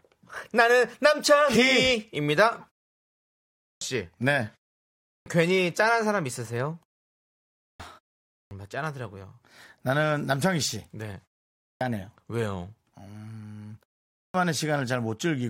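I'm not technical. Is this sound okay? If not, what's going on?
No. Clipped start after a pause, at 3.58, 4.99, 7.53, 8.24, 11.57 and 14.11 seconds: the playback device dozes off during each short silence and takes about a quarter of a second to wake, so each restart loses its opening sounds and begins abruptly.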